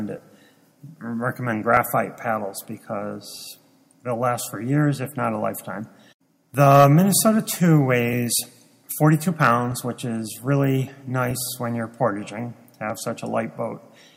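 From 0.18 s to 12.90 s a click or pop recurs every 1.59 s, about ten times in all. The likely cause is clock drift buffer slips: two devices on separate clocks disagree by several hundred parts per million, so the buffer between them creeps until a short block of a few dozen samples is dropped or repeated. Random dropouts or packet loss would strike irregularly. These clicks keep a fixed, metronomic spacing.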